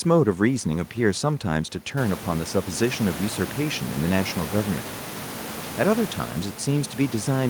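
Nothing's technically wrong with this bit of speech, just some room noise that picks up by about 15 dB around two seconds in and still sits roughly 15 dB under the talking.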